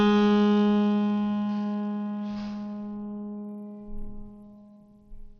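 Throughout the music, the treble stops dead at about 13.5 kHz, and what remains up top flickers and turns gritty, with a coarse noise and aliasing riding on the sound. This is likely Bluetooth SBC compression at a low bit pool, which points to a bitrate somewhere near 80 kbps. SBC starves its upper sub-bands and quantises the rest crudely. Unlike MP3 or AAC damage, the grit sounds granular and harsh rather than swirly or watery.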